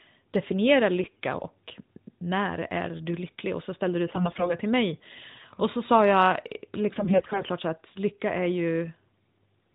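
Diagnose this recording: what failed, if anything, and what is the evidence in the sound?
Three bursts of AMR bit errors on the radio link corrupt the mobile codec's decoding. The sound turns hoarse and gargly from 1.02 to 1.20 s, just before "och när är du"; again from 4.08 to 4.55 s, between "så ställde du" and "till mig"; and from 6.94 to 7.49 s, after "så sa jag". Flipped low-protection bits scramble pulse positions and fine gain and spectral values while pitch and level hold. That separates this from packet loss, which gives gaps or smeared repeats. The narrowband band limit fits the 12.2 kbps AMR-NB mode.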